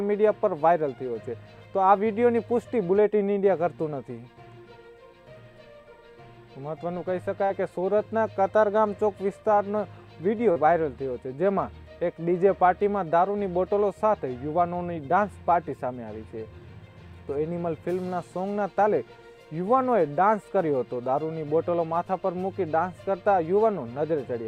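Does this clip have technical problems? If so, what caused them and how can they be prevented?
Yes. Short concealed packet loss at 7.45–7.51 s and 10.51–10.57 s: about 40 ms of audio arrived too late, and the decoder extrapolated the preceding sound before crossfading back, leaving brief smears. A larger jitter buffer or forward error correction would prevent this.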